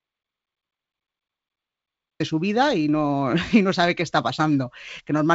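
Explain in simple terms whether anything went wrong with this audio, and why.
An audio dropout to silence fills the start, up to 2.2 s. The input was likely lost, so only dead silence was recorded. Sound returns with "su vida y no".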